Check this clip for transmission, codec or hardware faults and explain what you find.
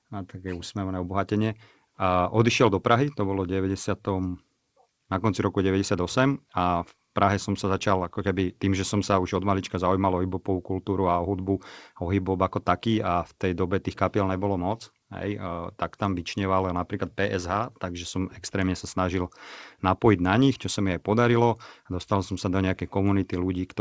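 The speech arrives over a WebRTC call path with G.722, consistent with a 64 kbps setting, and the empty band above 8 kHz is simply that codec's normal ceiling, so there is nothing here to flag as a fault.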